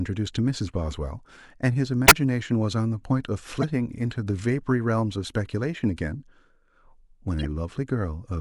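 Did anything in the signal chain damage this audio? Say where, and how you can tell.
Yes, at the codec stage: corrupt frames were decoded and played anyway in three places, at 2.06–2.12 s, 3.61–3.64 s and 7.39–7.45 s. Each is a short chirp or burst that doesn't belong to the speech. The first is loudest, peaking around -5 dBFS, and the last is much quieter. Flipped bits made the decoder apply wrong gains and codes over a few frames. On a spectrogram each shows as a brief block of misplaced energy; on the waveform, a sudden spike.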